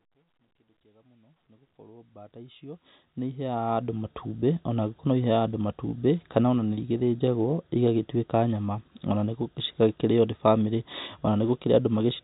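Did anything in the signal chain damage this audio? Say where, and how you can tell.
No, nothing damaged this audio.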